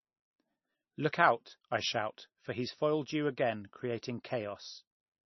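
Right from the start and all the way through, the speech sounds heavily mangled, with a watery, swirly quality and nothing at all above about 5.9 kHz, so the s sounds go dull and chirpy and word onsets smear. That's likely MP3 compression: starved of bits, the encoder chopped the treble at a fixed point and let weak frequency lines flicker on and off between frames. The damage level points to a very low bitrate, somewhere near 20 kbps.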